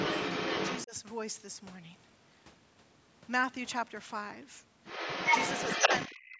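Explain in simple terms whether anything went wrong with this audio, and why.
Two things went wrong. From the start to 0.85 s, and again from 4.84 s to the end, a second voice can be heard under the talker. That is the other side's voice leaking through, likely from the talker's own loudspeaker. It is about as loud as the talker at first, and louder than the talker later. Because an extra voice is present, this is not the same as a dropout.

Speech suppressed in double talk shows as the talker's own voice briefly dipping at 0.85 to 0.94 s, 5.81 to 5.9 s and from 6.08 s to the end. The dip is deepest in that last stretch.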